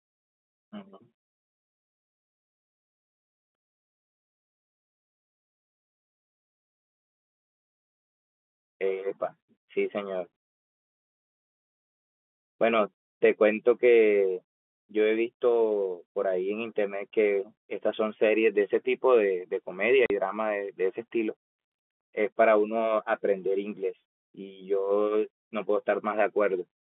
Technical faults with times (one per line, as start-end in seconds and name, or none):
20.06-20.10 packet loss filled with silence